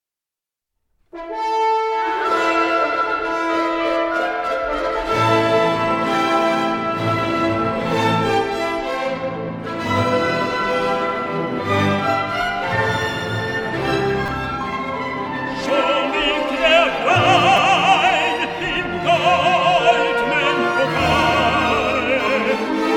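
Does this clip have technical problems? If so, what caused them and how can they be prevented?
Yes. A repeated buffer occurs at 14.26 s and again at 17.57 s. Each is a brief buzzy click, where one tiny slice of sound plays four extra times, then three, because fresh audio arrived late. The repeat period fits a 5 ms buffer, so the loops buzz at about 200 Hz and replace roughly 20 ms and 15 ms of audio. A waveform shows identical short segments stacked end to end with sharp joins. A spectrogram shows a thin vertical stripe with evenly spaced harmonic lines. Larger buffers, or giving the audio thread higher scheduling priority, would prevent these underruns.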